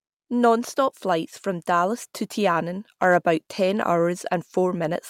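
From 3.03 to 3.29 s the speech shows hard clipping: the level runs about 2 dB past what one stage can pass, so the peaks are sheared flat. Those squared tops add high harmonics, heard as brief crackle on the loudest parts.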